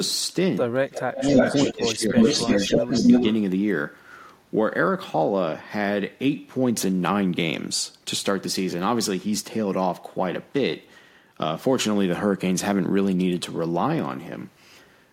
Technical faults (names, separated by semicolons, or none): echo leak; speech suppressed in double talk